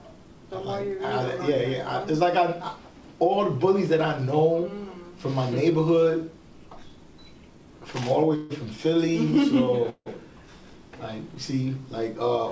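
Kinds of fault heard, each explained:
call audio freeze: The sound stalls twice. At 8.36 to 8.53 s, 138 ms is filled with a synthetic continuation of the preceding sound. At 9.90 to 10.09 s, 163 ms is filled, with 60 ms of silence in it. Delayed packets likely emptied the jitter buffer. Nothing is lost, so the audio resumes late. A spectrogram shows smeared, repeated texture below the codec's 8 kHz ceiling, and the waveform goes flat during the silence.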